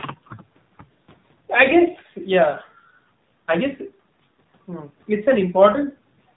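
Speech throughout sounds muffled, buzzy and synthetic, with nothing above 4 kHz: AMR narrowband mobile codec damage, plainly audible, consistent with a low bitrate near 7.4 kbps.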